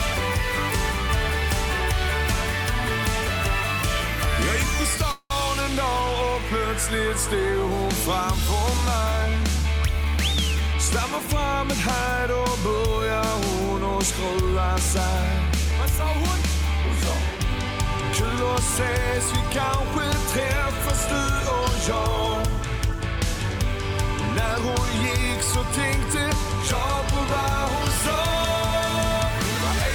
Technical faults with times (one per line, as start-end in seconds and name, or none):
5.11-5.32 call audio freeze
10.04-10.75 jitter buffer speed-up
15.46-16.20 jitter buffer speed-up